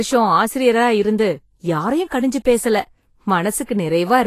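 From start to finish the speech has a hissy, grainy edge, with sibilants turned to rough noise, nothing above 14.2 kHz, and consonant onsets smeared rather than crisp. The likely cause is Vorbis compression at a low setting, which fits a bitrate around 33 kbps. The encoder cut the top of the spectrum and quantised the remaining treble so coarsely that fine detail was replaced by noise of similar energy, leaving the plainly audible codec damage heard throughout.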